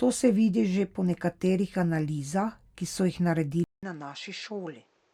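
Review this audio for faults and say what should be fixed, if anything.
Dropped samples at 3.46 s: the stream likely lost a couple of samples, a tiny fraction of a millisecond, so the waveform jumps straight to a later value. No audible sound goes missing, but the jump creates one sharp click, a thin vertical line across the spectrum. Giving the capture path enough buffer headroom that it never skips samples would prevent this.

Input switched to a poorer device at 3.64 s: capture likely moved to another microphone or a headset's call profile, with a 0.19 s silence at the changeover. After that the sound is about 10 dB quieter and dull and boxy, with a new noise floor about 35 dB below the signal. Locking the input device for the whole recording would prevent this.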